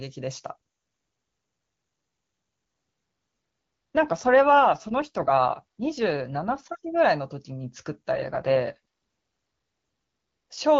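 From 3.95 to 6.66 s and again from 8.12 to 10.58 s, an AMR rate drop turns the speech rough and synthetic, which fits the codec falling from 23.85 to 8.85 kbit/s. On a spectrogram the bandwidth holds with no gap, but harmonics blur into grainy noise.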